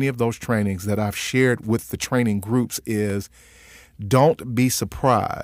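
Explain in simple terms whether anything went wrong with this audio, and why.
One fault occurs at 3.1 seconds, just after "with the training groups": a block of digital silence. For about 0.18 milliseconds, the stream of samples sending this speech to the speaker was replaced by zeros. The gap is far too short to hear as a pause. Because the audio jumps to dead silence and straight back with no fade, both edges land almost together, and the result is a single tiny click in the speech.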